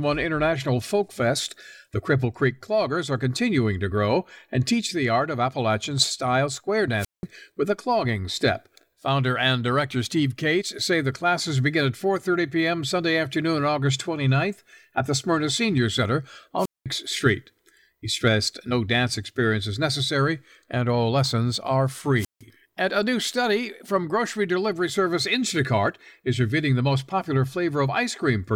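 Wireless microphone squelch dropout hits this speech recording three times: 6.98 to 7.24 s, between "style square" and "with a clogging step"; 16.58 to 16.86 s; and 22.16 to 22.42 s, right after "and all lessons are". Each time the FM radio link weakens, hiss rises briefly, then the receiver's squelch mutes the output for about 184, 203 and 159 ms respectively, leaving a near-silent gap before the voice returns.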